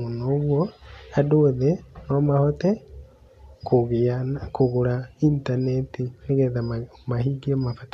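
No technical faults detected.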